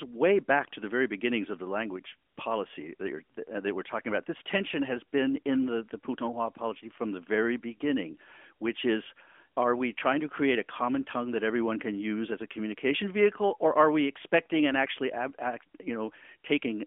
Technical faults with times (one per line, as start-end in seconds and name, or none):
2.30-2.38 AMR comfort noise